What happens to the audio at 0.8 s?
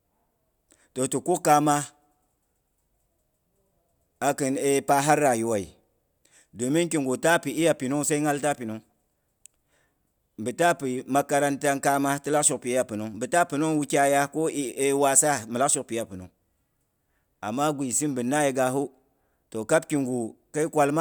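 At 0.8 s the audio is intact, with no fault audible at that moment.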